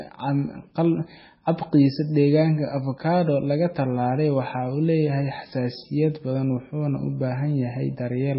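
MP3 compression damage runs through the whole speech clip, from start to finish, and the sound is likely the result of encoding at a very low bitrate, one that fits something around 16 kbps. Short of bits, the encoder has cut the treble flat at about 5.6 kHz, so nothing is heard above it, and has thrown away weaker frequency lines that flicker in and out between frames. The damage is heavy: a watery, swirling texture, metallic chirps on s sounds, and smeared consonant attacks.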